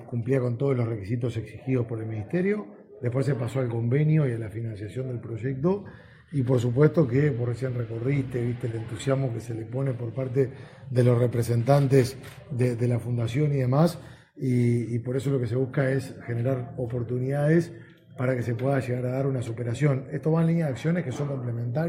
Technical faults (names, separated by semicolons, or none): repeated stalls (stutter)